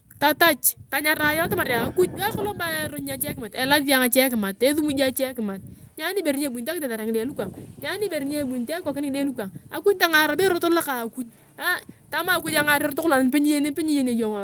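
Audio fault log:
Nothing to log here, as the speech runs along with no faults turning up anywhere.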